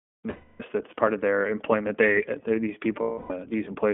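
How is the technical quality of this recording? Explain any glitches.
The recording is held back by narrowband coding and two dropouts.

Throughout, the speech sounds boxed-in, slightly rough and synthetic, with nothing below 200 Hz or above 3.5 kHz. That is the iLBC codec, a narrowband VoIP coder working in 20 ms frames. The plainly audible coarseness fits its 15.2 kbps mode.

From 0.30 to 0.64 s, just before "that's part of their", and again from 3.02 to 3.32 s, the speech turns into a held, faintly buzzy, breathy vowel. These are lost iLBC frames: the decoder repeated the last pitch cycle mixed with noise, fading it, and speech recovers almost immediately afterward.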